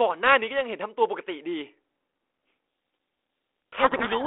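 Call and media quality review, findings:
Harsh distortion swamping the speech, 3.72 to 4.27 s. Codec payload misread: G.726 code words unpacked in reversed bit order, so the 32 kbit/s ADPCM stream decodes wrongly.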